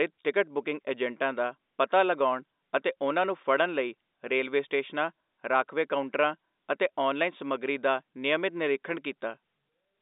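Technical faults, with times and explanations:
Nothing stood out on listening, the speech simply carrying the narrow band of a telephone line with nothing above 3.8 kHz.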